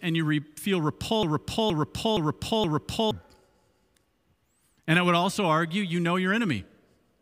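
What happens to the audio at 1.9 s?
At 1.9 s the speech is caught in a broken-record loop that runs from 1.23 s to 3.11 s. A fragment of about 470 ms repeats exactly, back to back, four times, so the same snippet stutters in place instead of moving forward. This is likely a stalled player, encoder or stream that kept resending the last chunk it held, and whatever speech belonged in that stretch is lost.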